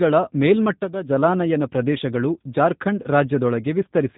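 Speech that sounds muffled, with nothing above 4 kHz, and plainly rough and synthetic throughout, the signature of the G.729 codec at a rate that fits 8 kbit/s, which rebuilds each 10 ms frame from a vocal tract filter, pitch predictor and sparse pulses.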